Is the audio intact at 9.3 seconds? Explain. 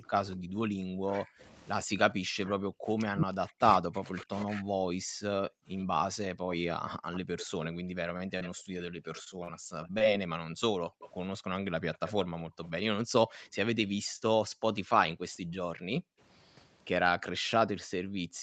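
No. At 9.3 s three faults overlap.

A short concealed packet loss runs from 9.24 to 9.28 s. About 20 ms of audio never arrived in time, and the receiver filled roughly 16 ms of it by extending the preceding sound before blending back. This gives a brief smear or wobble. Unlike a true dropout, there is no silent gap.

Background gated by the echo canceller spans 8.58 to 9.71 s. While the far-end loudspeaker played, the canceller pulled the microphone down by up to about 20 dB, so the room sound dips for around four tenths of a second in all. The ambience drops and returns, and no extra copy of the voice is added.

An echo leak, from 5.8 to 13.47 s, adds a delayed copy of the voice arriving 81 ms late at roughly 15 dB below the direct sound. The cause is likely a loudspeaker echo that the far side's canceller left partly uncancelled. This is a separate repeat following the voice, which distinguishes it from room reverberation.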